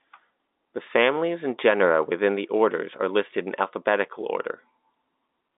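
Listening to this stretch of speech, carried over G.711 mu-law telephone coding with its line band running from 250 Hz to 3.7 kHz and nothing above 3.8 kHz, nothing stood out as a technical problem.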